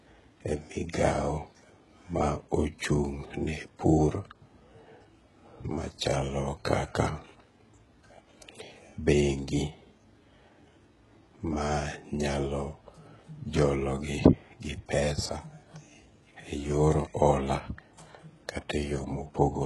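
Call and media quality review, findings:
HE-AAC compression, whole clip: s sounds gritty, metallic and lispy; treble synthetic, nothing above 11.5 kHz. Likely spectral band replication under heavy damage, fitting a bitrate near 12 kbps. Unlike a plain low-pass, the upper band exists but is copied, not original.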